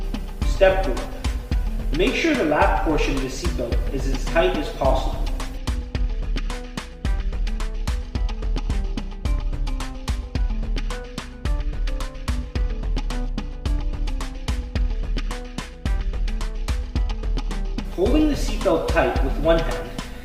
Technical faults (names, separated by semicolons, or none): adaptive stream starting at a low bitrate